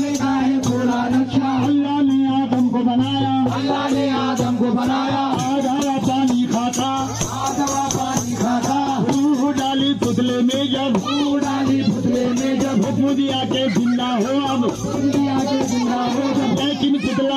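Nothing stood out on listening to the clip.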